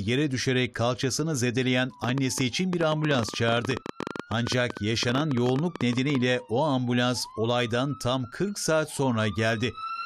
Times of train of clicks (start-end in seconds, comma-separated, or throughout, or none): 2.04-6.16